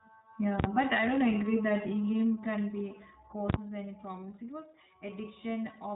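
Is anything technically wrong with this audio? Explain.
Yes, there are two faults.

iLBC codec, throughout: the speech has passed through this narrowband VoIP codec, which codes each 30 ms frame's excitation on its own without drawing on the previous frame. That fits its 13.33 kbps mode. Nothing above about 3.8 kHz survives, so the audio sounds dull and band-limited, and the codec damage is plainly audible as a rough, slightly synthetic quality.

Invalid numbers at full scale, 0.60 to 0.64 s, just before "but I": a calculation produced infinite or invalid values, and these were pinned to the largest positive or negative sample. The output sits flat at one extreme value, far from zero and beyond the speech's peaks, for about 43 ms, which fits a 2048-sample block. It is heard as a very loud pop at the start and end of that span, with no sound between them.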